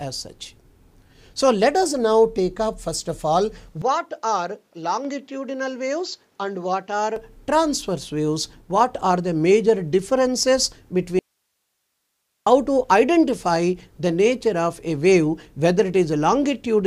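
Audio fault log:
3.82–7.16 s, input switched to a poorer device: the sound abruptly turns duller and boxier, with nothing above 7.6 kHz, and returns to full clarity at the end of the span. The switch itself has no gap. The level falls by about 5 dB, and a new noise floor appears, sitting about 45 dB below the signal. The narrower band, changed tone and different background fit the recording path having likely moved to a lesser microphone or headset profile.
11.19–12.46 s, audio dropout to a faint residue: the sound cuts out mid-flow for about 1.27 s and resumes just as abruptly, with no fade on either edge. The gap is not true silence. Only hiss remains, about 55 dB below the normal signal, which shows the downstream chain stayed live while the source feeding it went missing. This points to a likely momentary loss of the input signal rather than a pause or an edit.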